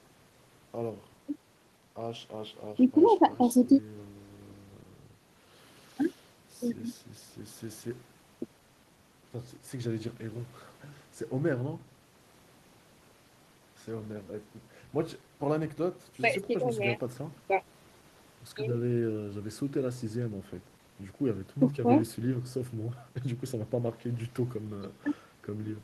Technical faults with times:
none

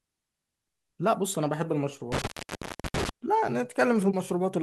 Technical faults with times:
2.12-3.09 intermittent contact

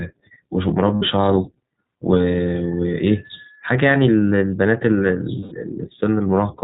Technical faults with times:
0.00-6.64 iLBC codec
0.96-1.03 lost iLBC frames
5.40-5.53 lost iLBC frames

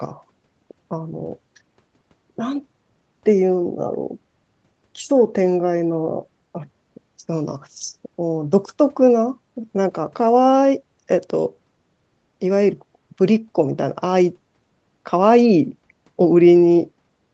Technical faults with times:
none

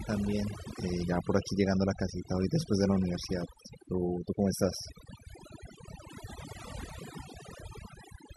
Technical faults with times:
0.00-8.37 overdone noise removal

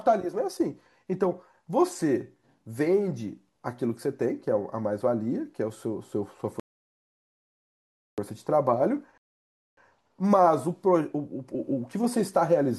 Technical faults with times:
6.60-8.18 rebuffering stall
9.18-9.77 rebuffering stall

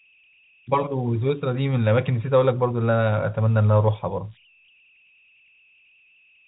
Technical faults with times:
0.00-6.48 converter idle tones

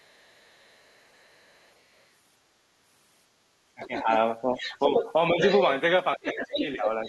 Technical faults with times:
0.00-1.72 other side's voice leaking through
3.75-5.39 speech suppressed in double talk
3.81-5.62 other side's voice leaking through
6.15-6.81 speech suppressed in double talk
6.24-7.08 other side's voice leaking through

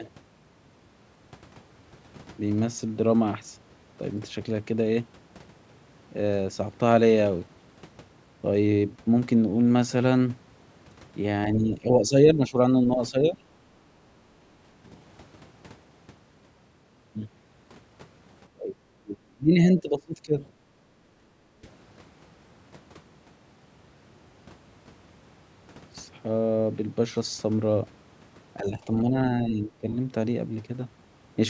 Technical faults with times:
11.59-13.42 speech suppressed in double talk
14.09-14.74 background gated by the echo canceller
18.54-20.43 speech suppressed in double talk
20.71-20.75 background gated by the echo canceller
21.03-21.26 speech suppressed in double talk
21.54-21.62 background gated by the echo canceller
28.60-29.88 speech suppressed in double talk
29.92-29.96 other side's voice leaking through

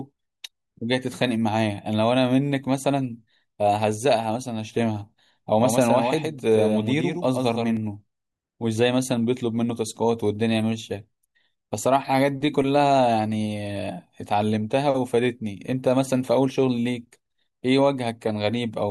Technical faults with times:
5.59-7.77 doubled audio track

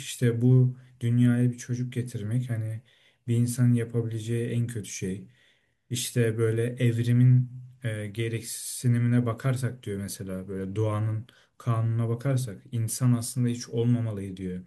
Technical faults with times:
none

